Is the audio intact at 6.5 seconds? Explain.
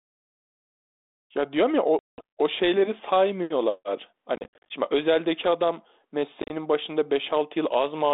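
No. From 6.42 to 6.52 s there is packet loss on an ADPCM call: several short packets dropped, which left the receiving decoder's adaptive predictor and step size out of step with the sender's. About 60 ms of speech goes missing, scattered across roughly 80 ms, with the longest gap near 30 ms. The sound breaks into abrupt silent holes, and each time it resumes it comes back with brief distortion, until the decoder settles.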